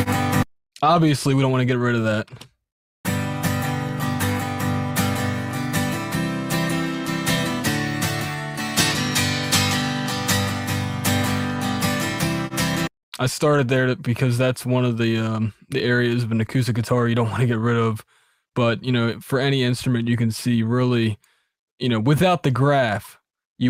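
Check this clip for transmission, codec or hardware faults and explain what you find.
Nothing stood out on listening to this recording.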